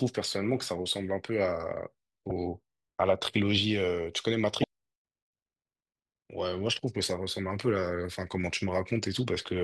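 At 2.28 to 2.31 s, and again at 4.61 to 4.64 s, the speech is broken by a brief glitch lasting about 30 ms. Both are damaged data in a compressed stream: corrupted bytes leave the decoder unable to read those frames correctly, so it loses sync and hunts for the next valid frame header. On a spectrogram each appears as a narrow vertical disturbance. The waveform shows a short irregular disruption in the surrounding envelope.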